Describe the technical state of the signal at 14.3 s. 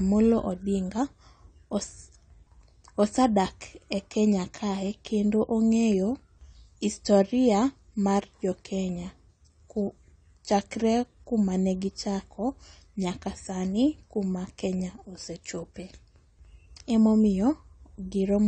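At 14.3 s the speech carries the same damage heard across the whole clip: a hard ceiling with nothing above 9 kHz, plus a dull, smeared texture that turns watery and warbling on sustained sounds and sibilants. The likely cause is AAC compression at a low rate, which fits roughly 32 kbps. The encoder discards and coarsely quantises spectral detail, not just trimming the top. That warble and holed spectrum is what separates it from a clean low-pass filter.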